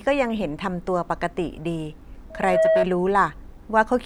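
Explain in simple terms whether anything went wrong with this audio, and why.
From 2.30 to 2.86 s there's a loudspeaker feedback squeal: the mic catches its own speaker, and a 644 Hz tone swells up within about a third of a second.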